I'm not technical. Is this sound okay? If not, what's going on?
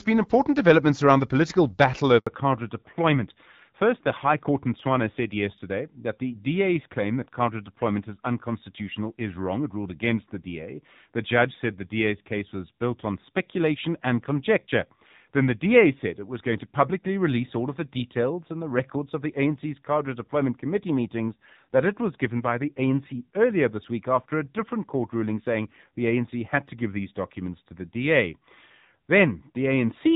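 No. Two problems show up early in this speech clip.

At 2.19 s there is a handover gap. The phone switched the call from one network to another, and for about 80 milliseconds, until 2.27 s, no sound got through. The voice dies away quickly and returns once the new connection is running. Whatever was said during that brief dropout is gone and cannot be recovered from the recording.

From 2.27 s to the end there is a fallback to narrowband. Before the switch the call ran on HD Voice, which sounds fairly clear. Afterwards it drops to an older, lower-quality phone codec that discards everything above 4 kHz. That upper range carries crispness and the hiss of sounds like s and f, so the voice becomes duller, more muffled and rougher. It stays that way for the rest of the clip.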